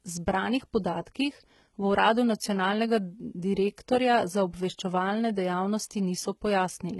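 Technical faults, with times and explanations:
Throughout, HE-AAC compression: the treble is likely rebuilt by band replication at a low bitrate near 16 kbps, so s sounds turn gritty and lispy, with nothing above 11.8 kHz.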